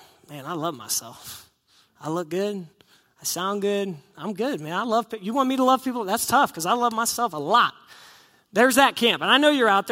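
Nothing in the recording stood out as a problem on listening.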